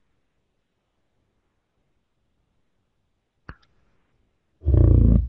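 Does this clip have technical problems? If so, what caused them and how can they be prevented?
Yes, there's a stereo read as mono fault running through the whole speech clip. The playback is at half speed, 0.5x, and everything sits a full octave low, down 12 semitones. Left and right samples got strung together as one channel, so each stereo frame turns into two mono samples, and you also get a fainter mirrored copy up in the top half of the spectrum. To prevent it, make sure the reader uses the file's real channel count and deinterleaves stereo before treating it as mono.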